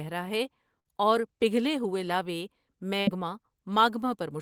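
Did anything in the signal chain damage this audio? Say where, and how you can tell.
Yes: a network burst of packet loss at 0.79–0.88 s and 3.01–3.10 s. The receiver held and faded the last sound, then skipped 60 ms.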